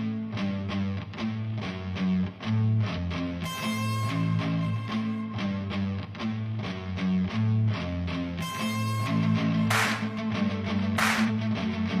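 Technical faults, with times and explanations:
2.93–2.98 s, 7.25–7.30 s and 11.24–11.29 s, compressed frames skipped: the sound jumps ahead roughly 100, 150 and 50 ms. Whole frames went missing or were rejected, which fits 46.4 ms frames.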